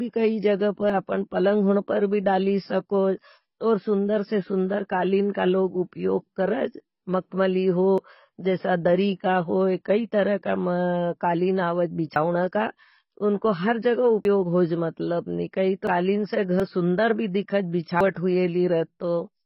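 The speech has likely passed through AAC compression at a very low rate, with damage consistent with AAC-LC at around 16 kbps. Starved of bits, the encoder lowers its cut-off and coarsely quantises what remains, leaving gaps in the spectrum. Throughout the whole recording the result is a dull, muffled tone, with smeared consonants, fizzy sibilants and a heavy warbling on sustained sounds.

On top of that, the audio shows what is likely a dropped buffer (overrun) at 0.90, 7.98, 12.16, 14.25, 15.87, 16.60 and 18.01 s. The capture software fell behind, and the hardware overwrote samples before they were read, so each lost stretch is spliced out rather than replaced with silence. Each point is heard as a sudden jump forward. The losses at 7.98, 12.16 and 16.60 s are brief, a few hundredths of a second. The others are about a tenth of a second, and the drop at 15.87 s is longer, about 0.15 s.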